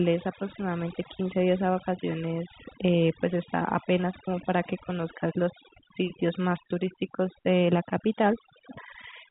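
Throughout the speech, overdone noise removal strips bands near the noise floor, leaving twinkling specks in near-silent gaps, over a telephone-band path capped at 3.8 kHz.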